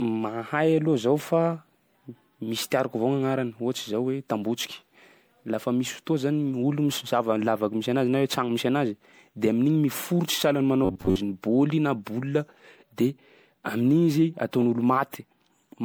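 The whole speech clip has generation loss, most likely from going through MP3 at around 96 kbit/s several times over, maybe five or so. Each re-encode lands on a shifted frame grid, so the swirly, hollow smearing and blurred consonant attacks stack up well beyond what one pass would do.

From 10.85 to 11.2 s, just before "bôly na boule de", you get robotic sound from repeated short buffers. The playback likely kept looping a tiny chunk of about 10.7 ms, covering most of that stretch, which pins a rigid, metallic buzz at about 94 Hz over the speech.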